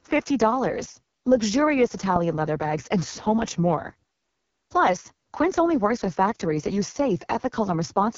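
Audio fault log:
Throughout: AMR wideband (HD Voice) codec, heavily degraded. The speech is rough and raspy, with nothing above 7.1 kHz, which fits the codec's lowest rate, about 6.6 kbit/s, where too few bits remain to model the voice cleanly.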